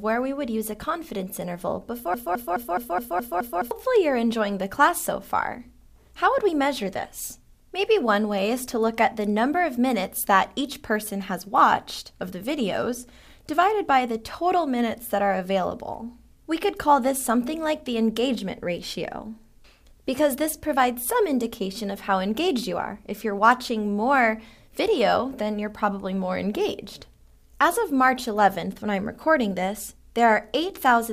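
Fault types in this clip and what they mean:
Broken-record loop: a 0.21 s fragment repeats seven times, 2.14 to 3.71 s, replacing the audio there; likely a stalled stream resending its last fragment.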